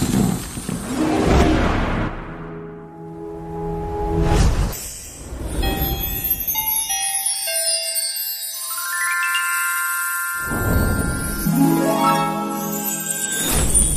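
Brief glitches at 2.07, 4.72, 9.06, 11.45 and 13.17 s come from damaged data in a compressed stream. Corrupted frames are misread, the decoder loses sync and resynchronises at the next frame header, leaving a short chirp or blip lasting under 20 ms each.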